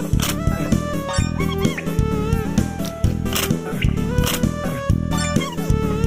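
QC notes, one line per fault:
No faults found: the signal stays continuous, with no dropouts, discontinuities or added noise at any point.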